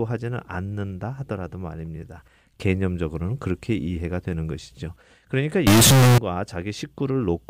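From 5.67 to 6.18 s the speech turns suddenly very loud and harsh, with background noise as loud as the voice, yet pitch stays traceable. This is float read as integer: 32-bit float samples likely read as 32-bit integers, squaring the waveform at a high, nearly fixed level.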